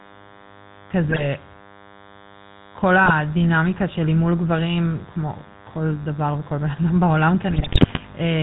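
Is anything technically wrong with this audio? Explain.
Yes, there are three problems. Throughout, a nearby DECT cordless phone's radio bursts every 10 ms are being rectified in the audio circuit, producing a thin, steady 100 Hz buzz with many harmonics, roughly 25 dB below the speech.

The speech has also been through a GSM full-rate codec, which fits a 13 kbps link. Its pulse-driven vocal tract model and 4 kHz cutoff make the voice audibly buzzy, gravelly and band-limited.

GSM bit errors appear at 1.08 to 1.27 s, 3.04 to 3.12 s, and 7.50 to 7.99 s. Corrupted filter, pitch and gain values reach the decoder, and the speech breaks into squawks, pops and gargling. The last burst is the longest, consistent with about two dozen damaged frames.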